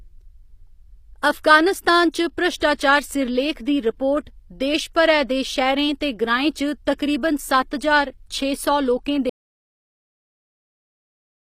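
From the start, the speech has the sound of HE-AAC compression, likely at a low bitrate, which fits an HE-AAC v2 stream at around 24 kbps. The damage is plainly audible: only the lower spectrum is truly coded, and the treble is rebuilt by copying lower bands upward under a coarse envelope. Sibilants turn gritty and lispy. On a spectrogram, the upper region looks smeared and repetitive, with harmonics that don't continue cleanly across the crossover.

At 9.30 s the audio drops out to silence and stays silent to the end. The input was likely lost, through a disconnected device, a failed link or a mute, while the recording kept writing silence. The speech cuts off mid-flow, and with no room tone underneath, the gap is dead rather than quiet. A waveform shows a flat line from 9.30 s onward, and the spectrogram goes blank there.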